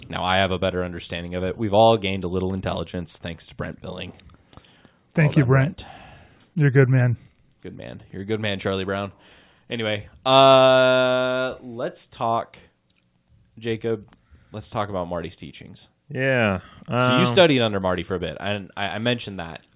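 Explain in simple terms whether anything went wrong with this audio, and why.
Nothing went wrong with this speech recording: the sound holds steady throughout, with no breaks, jumps or damage to the signal anywhere along the way.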